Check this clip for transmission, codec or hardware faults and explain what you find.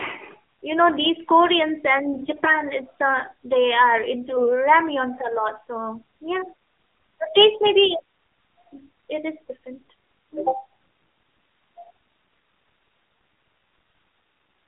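Two faults are present: narrowband mobile coding across the whole speech clip, and two short bursts of corrupted frames.

AMR narrowband mobile codec: Throughout, the audio is confined to a line band of roughly 200 Hz to 3.4 kHz, with nothing above 4 kHz. The codec models the vocal tract and drives it with a few pulses per 5 ms subframe. At this low rate the damage is plainly audible: the voice sounds buzzy and synthetic, which fits AMR-NB at about 7.4 kbps.

AMR bit errors: From 2.18 to 2.49 s and from 4.28 to 4.52 s, the voice keeps roughly its pitch and level but turns hoarse, scratchy and gargly. The first burst fits about 15 consecutive 20 ms frames, and the second about 7. In these frames, lightly protected bits were flipped at an error rate of around 5 percent, while the checksum on the critical bits still passed. The decoder therefore placed excitation pulses wrongly and used faulty fine gain and spectral values.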